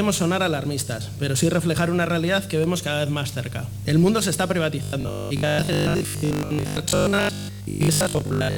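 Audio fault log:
4.83–8.57 s: robotic sound from repeated short buffers. A rigid, metallic 50 Hz buzz runs until the end, likely because new audio arrived too seldom and the last 20 ms kept being replayed while roughly 70% of the real audio was skipped.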